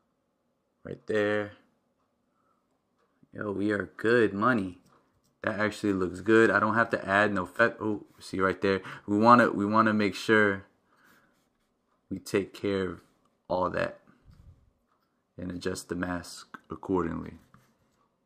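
From 3.10 to 4.81 s the sound runs 6% fast and 100 cents sharp, then snaps back. From 16.34 s onward it runs 6% slow and 106 cents flat. A likely drift correction step changed the playback rate abruptly. On a spectrogram, the harmonics jump together as a block.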